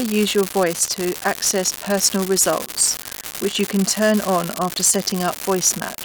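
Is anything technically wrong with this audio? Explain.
Yes. Throughout, an unreliable data bit flips at random, adding equal-height spikes that crackle steadily even in pauses, visible as scattered identical waveform spikes and broadband spectrogram specks.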